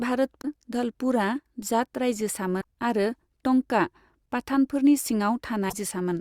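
Frames were most likely dropped from an MP3 stream, breaking the bit reservoir: the frames after each gap reach back for borrowed data and decode someone else's bytes instead. The sound skips forward with a brief glitch at 0.41–0.45 s, just before "धलपुरआ जाट", at 2.60–2.64 s, just before "आरो टंकआ", and at 5.68–5.74 s. Each lasts about 40 to 55 ms, roughly two 26.1 ms frames.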